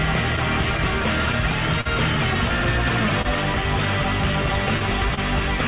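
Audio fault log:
Throughout, clock drift between sender and receiver: small timing hiccups recur across the clip at uneven intervals, with brief stretches where the sound is held or repeated rather than flowing straight on. The sender's audio clock runs roughly 3 percent slow against the receiver's, so the jitter buffer keeps draining. The receiver repeats short pieces to cover the shortfall.
1.81–1.87 s, 3.22–3.27 s and 5.15–5.19 s, short stall from a late packet: at each point the sound is held too long, with a slight buzz or dip, for 43 ms at the first and 29 ms at the other two. Nothing is missing afterwards. A packet had not arrived when due, so the empty buffer was filled by stretching the last sound until the packet came, then playback resumed from the same place, 43 ms and 29 ms later than before. The band stays limited to below 4 kHz, which points to a 64 kbps G.711 call codec.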